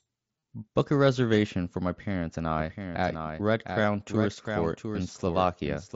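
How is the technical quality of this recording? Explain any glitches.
The recording has two glitches: a couple of short Bluetooth dropouts and a late echo of the whole track. It comes through a wideband headset link, mSBC by the sound of it, so the speech stops around 8 kHz and carries a light grain on the louder bits.

Concealed Bluetooth headset packet loss turns up at 0.39 to 0.42 s (about 38 ms) and again briefly at 3.82 s. Packets dropped between headset and phone, and the receiver looped the most recent stretch to fill the gap. The first one gives a short buzzy held tone with a tiny warble as real audio returns.

A doubled audio track kicks in abruptly at 2.59 s and runs to the end. A full-band copy of the speech sits roughly 700 ms behind, about 5 dB quieter, with no room colour or decay. The likely cause is a second, slower capture path mixed in alongside the main one.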